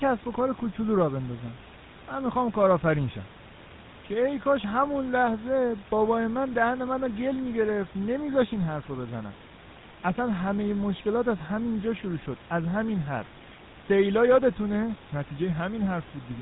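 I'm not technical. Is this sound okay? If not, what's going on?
No, the speech sounds buzzy and gravelly from start to finish. That comes from the GSM full-rate codec, an early mobile-phone format. It rebuilds the voice from simple repeated pulses and drops everything above 4 kHz, so it sounds rough and muffled.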